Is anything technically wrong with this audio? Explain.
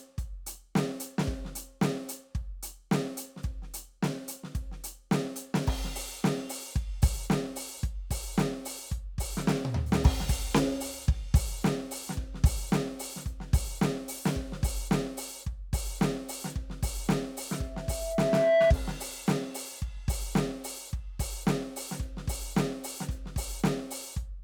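Yes. From 17.54 to 18.74 s the music is overtaken by loudspeaker feedback squeal. A microphone is re-hearing its own loudspeaker, and at 660 Hz the loop gain passes one, so that tone feeds on itself. It swells over about a second to roughly 10 dB above the music. On a spectrogram it is a single bright horizontal line at 660 Hz, and on the waveform the envelope climbs steadily.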